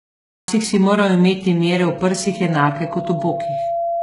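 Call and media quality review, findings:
Cut-off start, 0.00 to 0.48 s: digital silence, then speech cuts in abruptly at 0.48 s, just before "si moral imeti". No attack or fade-in. Capture or stream began late, mid-utterance; the first sound is truncated rather than building naturally.

Loudspeaker feedback squeal, 1.74 s to end, following "si moral imeti": single 680 Hz tone swelling over about two seconds to roughly 5 dB below the speech. The mic is picking up its own loudspeaker, and loop gain exceeds unity at 680 Hz, so that frequency self-sustains and grows.

HE-AAC compression, throughout: heavy codec damage, with nothing above 11.1 kHz and a synthetic, gritty top end on sibilants. Likely caused by spectral band replication, which rebuilds treble from copied lower bands. Consistent with a very low bitrate, around 12 kbps.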